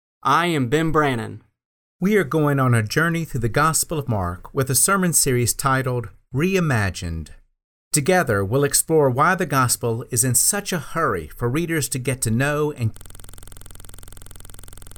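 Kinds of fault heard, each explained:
system hang loop: the computer froze while the hardware kept replaying one 46 ms buffer, leaving a 21.5 Hz buzz from 12.97 s to the end.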